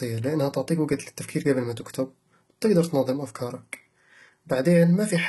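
From start to finish, the speech carries heavy codec damage. The treble stops sharply at about 11.8 kHz. Below that edge, the upper band sounds rebuilt rather than captured. The likely cause is HE-AAC compression. That codec stores only the lower spectrum and fills in the top by copying lower bands upward under a coarse envelope. The copied harmonics do not line up with the real ones. S sounds turn gritty, metallic or lispy. The damage fits a bitrate around 16 kbps.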